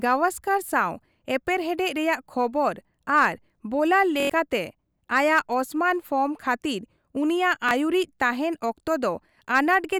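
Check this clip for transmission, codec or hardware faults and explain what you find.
Two playback dropouts of the repeated buffer kind turn up in this speech clip. Fresh audio failed to reach the output in time, so the device replayed its last 23 ms block. From 4.20 to 4.30 s that block sounds four extra times in a row, giving a hard-edged stutter and skipping about a tenth of a second of speech. At 7.69 to 7.71 s, just after "ᱯᱷᱚᱨᱢ ᱠᱷᱟᱹᱛᱤᱨ ᱩᱱᱤᱭᱟᱜ", a single extra play produces a brief stutter. The 23 ms repeat length fits a 1024-sample buffer.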